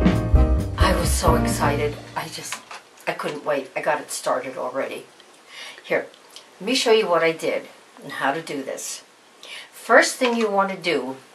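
Nothing stood out as a technical problem anywhere in the recording on listening.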